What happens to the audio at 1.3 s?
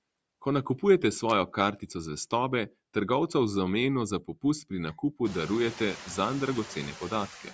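A burst of loose connector crackle runs from 1.29 to 1.32 s, just after "nakupujete s". A worn or dirty contact in the signal path briefly loses and regains its connection. Each break chops the audio, and any DC on the line jumps and pops. The result is a short, scratchy crackle about 30 ms long. It is irregular, not a clean click.

Noise suppressor artifacts are also present at this moment, as they are throughout. The suppressor works frame by frame. It pulls down bands it judges to be steady noise by about 21 dB. The background therefore dips between words and rises again under them.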